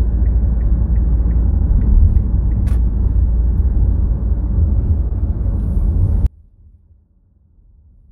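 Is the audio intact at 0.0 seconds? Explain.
Yes, the audio is intact at 0.0 seconds, with no technical fault present at that moment.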